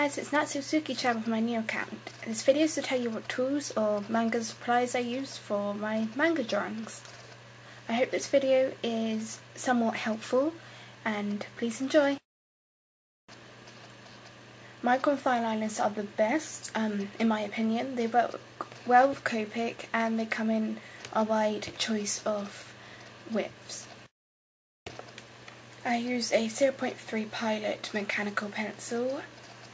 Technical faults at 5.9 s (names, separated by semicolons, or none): none